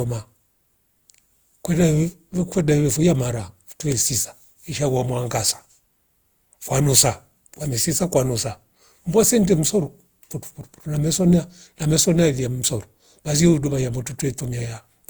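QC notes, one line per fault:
Throughout, generation loss: the speech sounds swirly, smeared and hollow, with blurred attacks, though the audio extends to about 20.1 kHz. The likely cause is about four lossy passes, fitting Opus near 64 kbit/s, each adding quantisation noise on a shifted frame grid.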